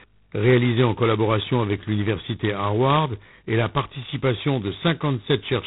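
The whole clip carries heavy G.726 ADPCM damage: a harsh, rasping hiss riding the speech level, nothing above 3.9 kHz, pointing to the 16 kbit/s mode.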